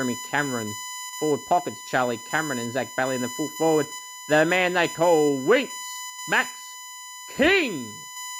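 From start to finish the speech carries USB whine: a fixed-pitch tone on a 1 kHz series, strongest at 7 kHz and not far below the voice, from bus frame current leaking through power or ground. Mains hum sits far lower, near 50 or 60 Hz.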